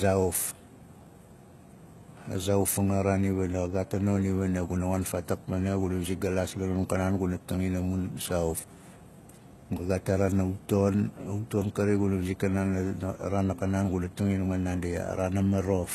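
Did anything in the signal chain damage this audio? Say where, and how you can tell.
Yes, at the codec stage, where the speech was likely squeezed through HE-AAC compression at a very low rate, consistent with about 16 kbps. The damage is plainly audible throughout. Only the lower band is truly coded. The treble is regenerated by copying lower bands upward under a coarse envelope, so the highs sound false. S sounds come out gritty and lispy, and nothing survives above 12.3 kHz.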